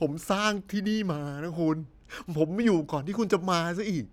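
Nothing stood out as a technical fault on listening to this speech recording.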